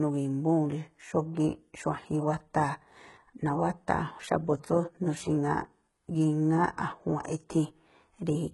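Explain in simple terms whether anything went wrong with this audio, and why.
HE-AAC compression, likely the cause, affects the speech throughout. The codec keeps only the lower sound in detail and fakes the treble by copying lower parts upward, so s sounds come out heavily gritty and lispy, with nothing at all above 11.5 kHz.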